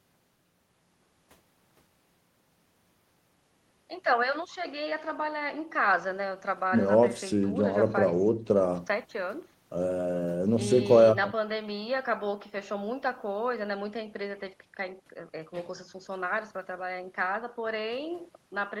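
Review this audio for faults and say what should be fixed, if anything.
Nothing needs fixing in this speech recording. It has passed through a call path whose top end stops at 12 kHz, consistent with Opus at a moderate bitrate around 24 kbps.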